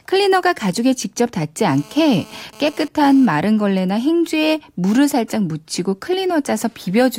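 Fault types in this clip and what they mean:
GSM phone buzz: raspy 217 Hz buzz from 1.69 to 3.26 s, about 25 dB below the speech, coming and going with data bursts, unlike steadier mains hum.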